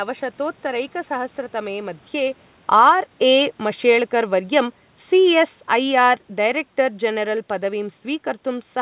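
Automatic gain falling runs from 2.15 to 7.79 s: the gain control judged the input too loud or its background too noisy and eased its gain down by about 8 dB, so the speech and its room background sink together. Automatic gain rising briefly interrupts this between 2.9 and 3.29 s, when, shortly after the talker shifts position around 2 s, the control pushes gain up about 5 dB and the level swells. The whole clip is heard through a narrow band with nothing above 4 kHz, which fits a G.711 telephone codec.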